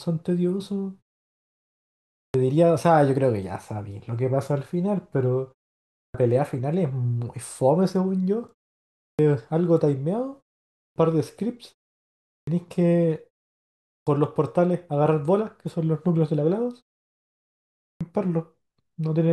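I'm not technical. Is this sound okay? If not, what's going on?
No. There is a clipped start after a pause. After each short silence, the playback device dozes off and takes a moment to wake. The first fifth of a second of speech gets cut. Hear it at 2.17, 5.96, 9.0, 10.77, 12.28, 13.89 and 17.82 seconds.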